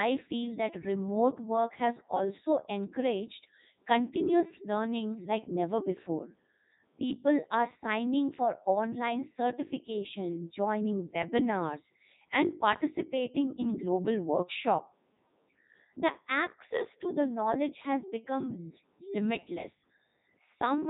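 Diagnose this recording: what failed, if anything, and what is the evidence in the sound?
Codec 2 vocoder damage runs through the whole recording, a failure at the codec stage. The speech sounds robotic and buzzy from start to finish, with nothing above 3.8 kHz, and the damage is heavy. The decoder never reconstructs the original waveform. It rebuilds each frame from sine waves driven by transmitted pitch, voicing, energy and a coarse spectral envelope. The buzz and the hard band limit fit Codec 2's 3.2 kbit/s mode.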